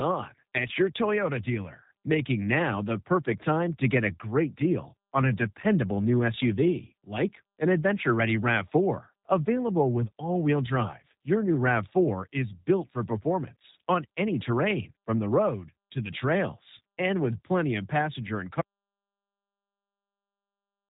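Throughout, G.729 codec damage is plainly audible as rough, synthetic speech. The spectrogram is empty above 3.8 kHz, which fits an 8 kbit/s stream.

At 18.61 s, after "plenty of passenger and", an audio dropout to silence runs to the end. The waveform goes flat with no room tone, likely from lost input.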